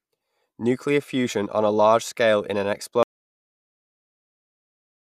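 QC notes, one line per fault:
3.03 to 5.17 s, audio dropout to silence: right after "large scale in an" the speech cuts to silence, no room tone, likely a lost input link.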